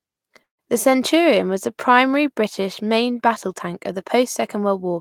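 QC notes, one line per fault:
0.43–0.62 s, call audio freeze: the last sound smears into a brief fading buzz, then about 130 ms of silence, before the speech resumes exactly where it stopped, about 153 ms later, with nothing skipped, unlike a dropout. Delayed packets likely emptied the jitter buffer.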